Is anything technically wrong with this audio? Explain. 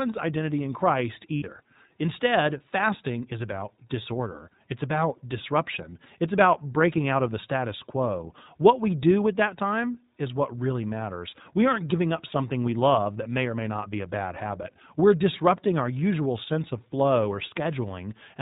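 Yes. Throughout, the speech sounds band-limited, slightly rough and synthetic. This is the iLBC codec, which cuts everything above 4 kHz and codes each frame independently. The damage is plainly audible and fits its 15.2 kbps, 20 ms frame mode.

From 1.36 to 1.44 s there are lost iLBC frames: a short held, buzzy vowel replaces the speech. The decoder repeats the last pitch cycle mixed with noise, consistent with about 60 ms of missing frames.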